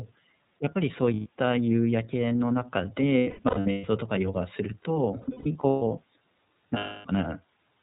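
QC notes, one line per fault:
throughout, iLBC codec: everything above 4 kHz is gone, and the speech has a rough, slightly synthetic edge that's plainly audible. That fits iLBC's 13.33 kbps mode, where each 30 ms frame's excitation is coded on its own.
1.14–1.28 s, 3.18–3.87 s, 5.22–5.82 s, 6.77–7.06 s, lost iLBC frames: the decoder fills the holes by repeating the last pitch cycle with noise, so you hear a held, buzzy vowel that fades on the longer stretches. The first gap is a solid 120 ms and the last a solid 270 ms. The middle two are scattered drops, with about 480 ms and 390 ms missing and the longest single runs around 100 ms and 150 ms. Each time the voice snaps back almost immediately, since the frames don't depend on each other.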